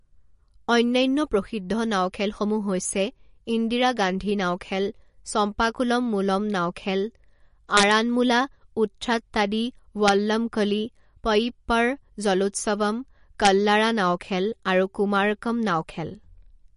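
Speech with a watery, swirly texture and nothing above 10.6 kHz, most likely heavy MP3 compression at roughly 40 kbps. Integer overflow wraps peaks into harsh cracks at 7.77–7.91 s (about 3 dB over), 10.08 s (about 1 dB) and 13.45–13.47 s (about 2 dB), just before "নাও খেল আৰু কুমাৰকম".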